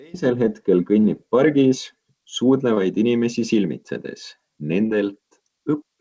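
Brief smears at 1.00–1.06, 2.74–2.78 and 4.86–4.92 s are short concealed packet loss. About 40, 20 and 40 ms arrived too late, and the receiver extended the preceding sound to fill each gap.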